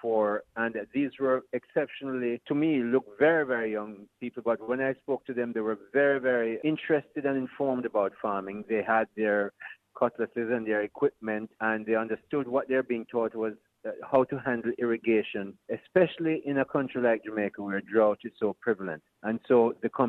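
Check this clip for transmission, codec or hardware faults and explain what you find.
Nothing wrong turns up anywhere in this recording.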